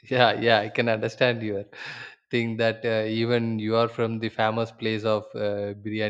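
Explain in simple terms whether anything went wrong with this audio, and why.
Nothing went wrong with this audio; the speech comes through without any fault you can hear.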